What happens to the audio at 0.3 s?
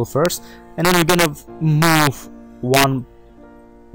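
At about 0.26 s there is an integer overflow: a peak exceeded the largest integer value and wrapped to the opposite sign, producing a single crack.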